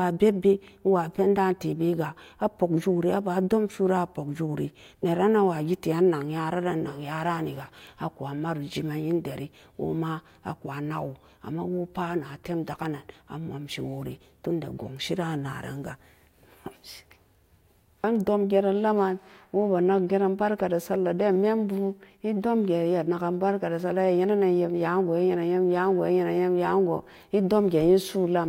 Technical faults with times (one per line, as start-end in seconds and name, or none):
none